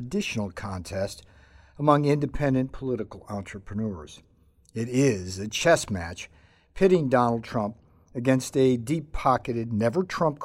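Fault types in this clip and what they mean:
Nothing to flag here; the speech comes across without any audible fault at all.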